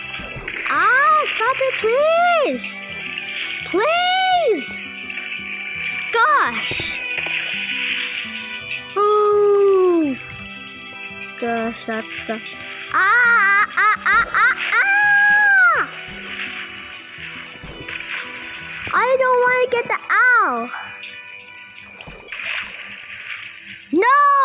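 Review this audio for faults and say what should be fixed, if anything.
Nothing here needs fixing. The audio has the narrowband character of a call path, with nothing above 4 kHz, which fits a G.711 mu-law telephone codec.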